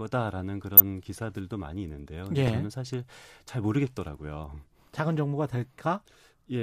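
Weak DAB reception let bit errors slip past the error correction into the MP2 audio data, twice: from 0.77 to 0.82 s, and again from 2.44 to 2.53 s. The error rate was a small fraction of a percent, and the second burst hit slightly harder, which fits several frames being corrupted. Each time, damaged samples put short blips of noise in individual sub-bands, so the speech briefly burbles: DAB burbling.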